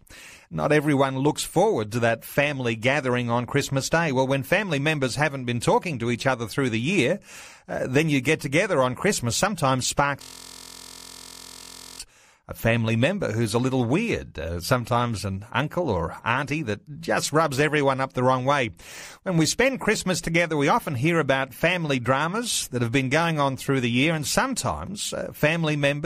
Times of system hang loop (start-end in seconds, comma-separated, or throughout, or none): 10.22-12.00